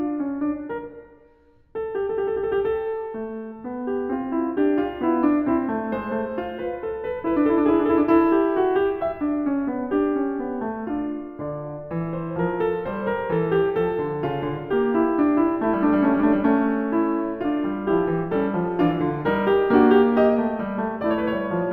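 Imaging from linear upsampling runs through the whole music clip. The material appears to have been raised to a higher rate from a 16 kHz original by drawing straight lines between samples, a filter too weak to remove mirror copies. The top end is dulled, and a faint image of the spectrum sits between 8 and 16 kHz, roughly fifty decibels below the music. It adds a light metallic shimmer to high notes.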